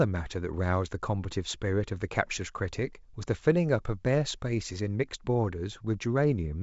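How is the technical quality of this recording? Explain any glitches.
The technical quality of this recording is good, with no glitches to explain in the wideband telephone speech, which reaches up to 7.7 kHz.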